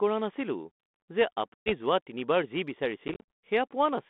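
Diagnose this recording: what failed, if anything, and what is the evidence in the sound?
Packet loss on an ADPCM call, at the network stage. Hard-edged silent holes appear at 1.54 to 1.72 s (120 ms lost) and at 3.08 to 3.23 s (150 ms lost in bursts of up to 40 ms). Unlike a plain dropout, the speech resumes slightly distorted until the decoder's predictor and step size resynchronise.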